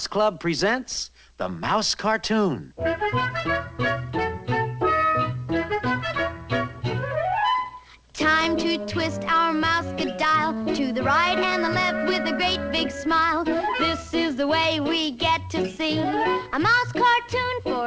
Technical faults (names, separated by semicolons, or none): none